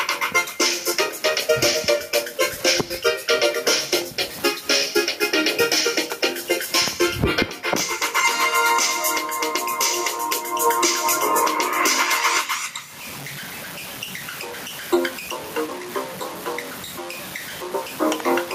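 Gain pumping runs through the whole clip. The level is pulled down hard on each loud sound, a swing of something like 25 dB. The likely cause is an input gain set far too high for the microphone, with a fast limiter or compressor clamping every peak. Loud and quiet passages sit unnaturally close in level, leaving the sound squashed.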